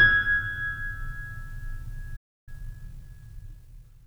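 Playback stall at 2.16 s: the music cuts to silence for about 0.31 s, resuming at 2.49 s. The player likely ran short of buffered data or had its output thread blocked, leaving nothing to send until it recovered.

Time-compressed catch-up runs from 2.49 s to the end of the clip. To work off the backlog, the player trims and cross-fades small slices, so the music plays about 1.1 times fast at unchanged pitch, sounding hurried.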